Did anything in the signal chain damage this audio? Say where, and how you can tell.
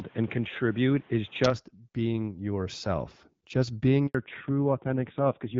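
Yes. The opening 1.5 s sound like they come from a different, poorer microphone, most likely an input switched to a poorer device at the driver stage. Nothing reaches above 3.8 kHz, the background carries its own noise roughly 30 dB under the speech, and the level sits about 5 dB away from the rest. At 1.5 s the sound opens up with no silence at all. A codec drop would not restore bandwidth, and it would not shift the noise floor and level together.

At 4.07 s there is a handover gap in the network stage. The speech fades out within a few tens of milliseconds and stays silent for 80 ms until 4.15 s, when the new link starts carrying audio. Random packet loss would leave scattered, concealed holes while the tone stayed the same. This gap is a single clean silence, and the sound changes character immediately afterwards. That pattern points to the call moving between networks.

From 4.15 s to the end, the call falls back to narrowband, a change made in call processing and the codec. 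Before the gap, the HD Voice wideband codec carried the speech cleanly, with energy up toward 7 kHz. After it, nothing appears above 4 kHz, and the speech turns duller and raspy, which fits a low-rate narrowband codec around 6 kbit/s. A poorer microphone would change the noise and level, but here only the bandwidth and the coding texture change.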